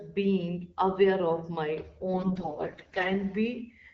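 From 2.14 to 3.10 s the speech picks up AMR bit errors. Over that stretch of roughly fifty 20 ms frames, the less protected bits get corrupted, at a heavy rate of something like one bit in seven. The checksum on the core bits keeps passing, so the decoder uses the bad data: excitation pulses land in the wrong spots and the finer gain and spectral values drift. Pitch and level hold roughly steady, but the voice goes hoarse and gargly. The underlying wideband coding sounds clean, which fits AMR-WB at 12.65 kbit/s.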